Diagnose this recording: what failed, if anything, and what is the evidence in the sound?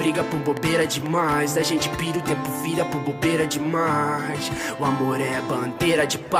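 A train of clicks runs from 0.08 to 1.33 s: about seven near-identical pulses at a steady 4 per second, peaking roughly 10 dB above the sound. Unlike random crackle or dropout gaps, the regular spacing points to likely interference in the analogue wiring.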